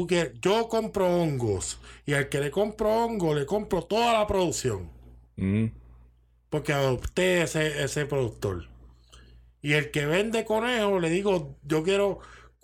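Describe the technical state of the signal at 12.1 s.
At 12.1 s the speech signal is intact, with no audible technical fault at that moment.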